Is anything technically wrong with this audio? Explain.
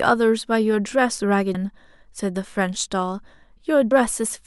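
Yes. Two short bursts of damaged data in a compressed stream interrupt the speech, at about 1.53 s and 3.90 s. At each point the compressed data is corrupt, so the decoder misreads the affected frame and loses sync until it locks onto the next valid frame header. Each event is heard as a brief chirp, squawk, click or short hole. On a waveform it appears as an abrupt discontinuity, and on a spectrogram as a thin vertical band that breaks the harmonic pattern of the speech.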